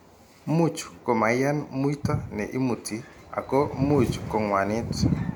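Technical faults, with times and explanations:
No technical faults are audible.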